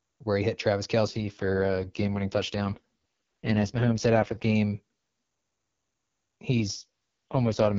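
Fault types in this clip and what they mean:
AMR rate drop: the speech turns rough, raspy and synthetic from 1.07 to 4.55 s and again from 6.52 s to the end, with no gap or narrowing, which fits a weak radio link forcing AMR-WB down from 23.85 to 6.6 kbit/s.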